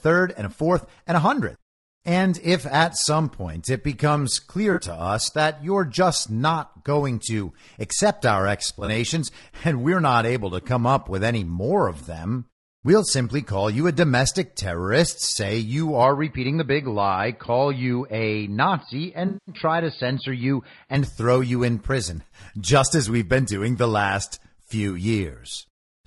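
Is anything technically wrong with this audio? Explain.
Yes, a few things. Let's go through them.

The whole clip has low-delay AAC compression damage, and it's plainly audible. The speech sounds rough and grainy, with noise creeping in between the harmonics and a top band that sounds a bit synthetic. That's most likely AAC-ELD, the low-delay codec used for video calls. Its short frames resolve pitch harmonics poorly, so at a rate around 32 kbps the encoder is starved for bits, and the voice gets that coarse texture.

There are three spots of AAC frame loss with concealment. In each, the decoder lost data and filled the gap from the last good spectrum. The first is at 4.73 to 4.79 s, right after "point it becomes clear" and before "us that you're just". It's a 40 ms smeared patch. The second comes after "going to accept our", at 8.67 to 8.89 s. About 100 ms are lost in bits scattered across 200 ms, with the longest run around 40 ms, so you hear a phasey flutter. 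The third, at 19.27 to 19.55 s, covers 200 ms. It's long enough that the concealed sound audibly sags and comes back.

From 16.03 to 20.96 s, after "domestic terrorist say you" and up to "throw you in prison", the input switched to a poorer device, likely a different mic or a headset profile. Nothing comes through above 4.8 kHz, so the speech turns dull and boxy. A new noise floor sits about 50 dB under the signal. There's no gap at the switch and the level barely moves, so the change in tone is what gives it away.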